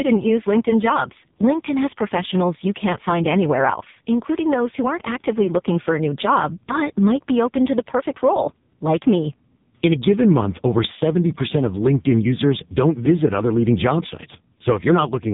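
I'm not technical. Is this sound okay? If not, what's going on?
No, the speech has gone through an AMR narrowband mobile codec from start to finish, so it sounds like an old phone call: muffled, with nothing above 3.8 kHz, and heavily buzzy and robotic.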